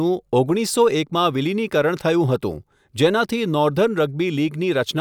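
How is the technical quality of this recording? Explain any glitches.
The technical quality of this recording is sound, with no glitches to explain.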